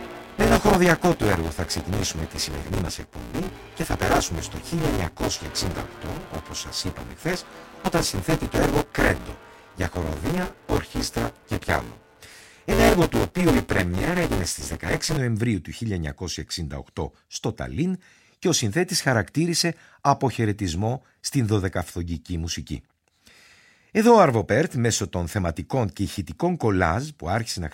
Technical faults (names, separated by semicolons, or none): buffer tearing